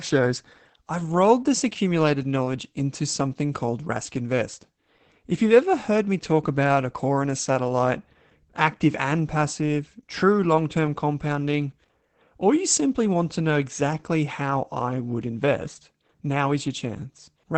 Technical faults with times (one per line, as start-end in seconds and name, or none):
0.00-17.57 Opus voice compression